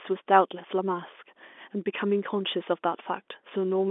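No faults turn up anywhere in this speech; it simply carries the narrow band of an ordinary G.711 telephone line, running from about 250 Hz up to 3.5 kHz.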